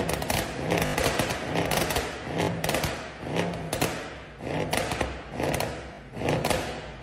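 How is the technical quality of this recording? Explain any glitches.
The recording has four short glitches, all a repeated buffer, at 0.86, 2.44, 4.62 and 5.94 s. Late audio made playback loop a slice that fits a 20 ms buffer, giving hard-edged buzzy stutters, the longest until 0.94 s. The waveform shows identical blocks tiled end to end, and the spectrogram shows vertical lines at each join.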